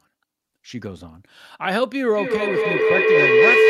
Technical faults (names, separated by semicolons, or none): feedback howl